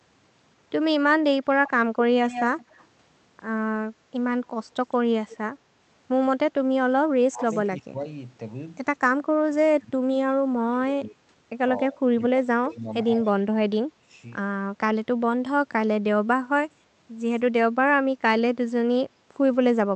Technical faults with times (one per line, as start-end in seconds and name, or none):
0.97-2.04 speech suppressed in double talk
1.67-2.86 echo leak
3.84-3.89 speech suppressed in double talk
4.45-5.37 echo leak
6.61-14.11 speech suppressed in double talk
7.49-7.54 echo leak
12.71-12.76 echo leak
16.42-19.04 speech suppressed in double talk